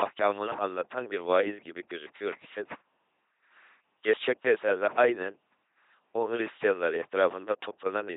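Speech, coded with an LPC-10 vocoder throughout and heavily damaged. Each moment is rebuilt from a short all-pole filter driven by either a pulse train or noise, giving a buzzy, robotic sound. Nothing remains above 3.8 kHz, which fits a 2.4 kbit/s rate.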